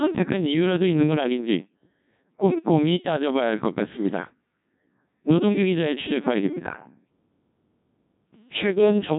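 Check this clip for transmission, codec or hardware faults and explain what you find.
The speech carries one fault, and it lasts the whole clip: a Codec 2 vocoder. The waveform is never transmitted. Only pitch, voicing, energy and a rough spectral envelope are sent, and the decoder rebuilds the speech from sine waves. The result is heavily damaged, robotic and buzzy, with nothing above 3.8 kHz. The degradation sounds consistent with about 1.6 kbit/s. A narrowband telephone filter would only dull the sound, but here the natural texture of the speech is replaced by a synthetic one.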